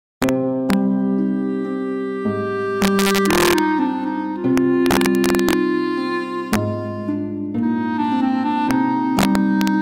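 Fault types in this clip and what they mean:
Integer overflow: violent cracks, far sharper than ordinary clipping, break out on the loudest moments of the music, with longer crackling stretches at 2.82–3.59 s, 4.58–5.53 s and 9.19–9.68 s and brief hits near 0.22, 0.70, 6.53 and 8.71 s. Peaks exceeding the largest integer by only about 0 to 3 dB wrap around to the opposite sign instead of being held at the limit, so each sample leaps across the full range.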